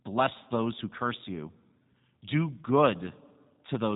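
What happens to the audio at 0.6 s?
At 0.6 s the speech is still passing through G.729 coding, as it does throughout, rebuilt from pulses and a filter at what sounds like 8 kbit/s, so it is rough and synthetic with nothing above 3.8 kHz.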